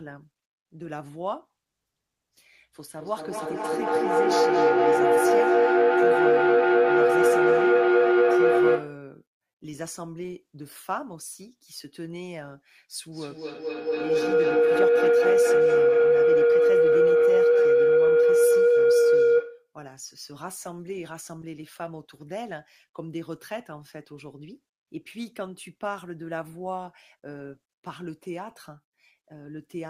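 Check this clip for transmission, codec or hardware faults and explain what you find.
Feedback howl occurs twice in this speech, from 2.94 to 9.11 s and from 13.12 to 19.75 s. Sound loops from loudspeaker to microphone, gaining on each trip. The tone sits near 400 Hz, then near 500 Hz. It pulses about every fifth of a second and peaks about 15 dB above the speech.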